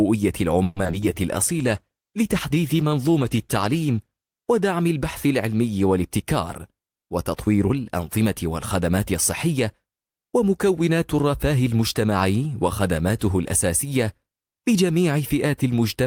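From 0.63 to 1.04 s, repeated packet loss makes the audio choppy, with pieces missing. A handful of gaps are patched by stretching the last sound, leaving smeared, repeating spectrogram patches and waveform dropouts.

A call bitrate drop from 1.44 to 6.41 s makes the sound watery and muffled. It fits a fall from 32 to 14 kbps, and the spectrogram's upper band empties, lowest for about 2.4 s.

From 6.48 to 7.71 s, a jitter buffer speed-up trims about a tenth of a second. The audio runs roughly 9% fast at unchanged pitch, and the waveform looks compressed in time.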